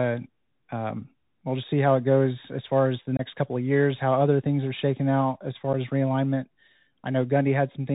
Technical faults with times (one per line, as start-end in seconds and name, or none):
0.00-7.94 Bluetooth CVSD headset codec
3.17-3.21 unconcealed Bluetooth headset packet loss
5.73 unconcealed Bluetooth headset packet loss